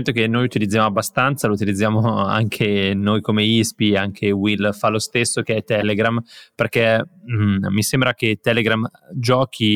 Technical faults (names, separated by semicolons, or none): corrupt frame decoded